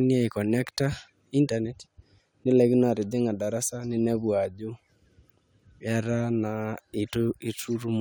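No technical faults are audible in this recording.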